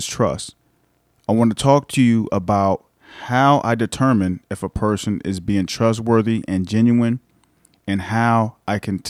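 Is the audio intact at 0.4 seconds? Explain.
Yes, the audio is intact at 0.4 seconds, with no dropout, click, distortion or other fault at that point.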